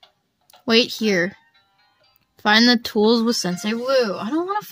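From 3.36 s to the end of the audio, one channel arrives around 5 ms later than the other, and when the two are summed to mono they partly cancel. This channel delay produces comb filtering: fixed notches starting at roughly 100 Hz and repeating every 200 Hz or so up the spectrum. The final stretch therefore turns hollow and phasey.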